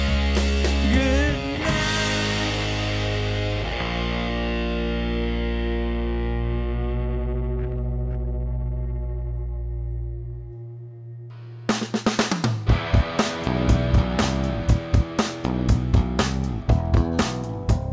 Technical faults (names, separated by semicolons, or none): none